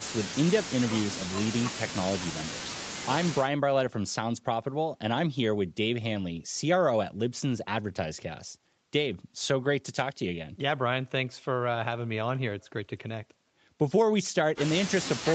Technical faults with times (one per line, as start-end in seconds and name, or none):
none